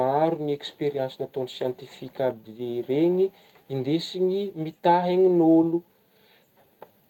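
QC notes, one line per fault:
The signal shows no audible technical faults at any point.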